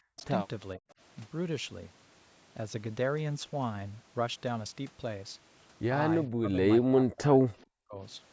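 From 0.06 to 0.19 s the speech suddenly drops away, by roughly 40 dB at its deepest. It happens again from 0.76 to 0.86 s. This is speech suppressed in double talk. The likely cause is both sides talking at once. The echo canceller cannot tell this talker from the loudspeaker echo. So it turns everything down, and the speech breaks into gaps.

From 0.90 to 0.94 s a faint delayed copy of the voice slips through. It trails the original by 426 ms and sits far below the speech. This is an echo leak, likely from a far-end loudspeaker whose echo canceller missed part of the signal.

From 6.28 to 8.0 s a longer suppression follows. The speech fades and cuts out in pieces across about one and a half seconds.

Inside that stretch, from 7.59 to 7.65 s, the echo leaks again. It has the same 426 ms delay and is a little louder than before, though still faint.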